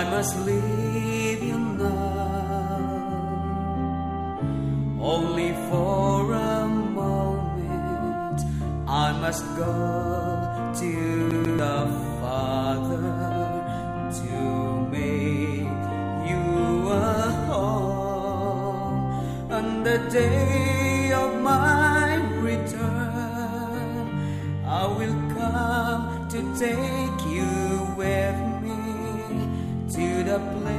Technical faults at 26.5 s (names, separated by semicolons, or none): none